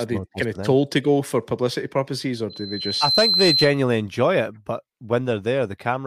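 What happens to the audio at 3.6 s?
At 3.6 s the speech is overlaid by loudspeaker feedback squeal. It runs from 2.50 s, just after "for publicity purposes or", to 3.79 s, ending before "enjoy it but". A microphone is picking up the loudspeaker it feeds. At 4.1 kHz the loop gain exceeds one, so that tone keeps reinforcing itself. It swells over roughly 0.7 s into a piercing whistle. It then sits about 5 dB above the speech until it ends.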